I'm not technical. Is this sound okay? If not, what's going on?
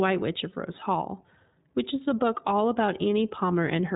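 No. The iLBC codec, a telephone-style compression, runs throughout the speech. It cuts everything above about 3.8 kHz, so it sounds muffled, and it codes each 20 ms slice separately, which leaves a plainly audible rough, slightly synthetic edge.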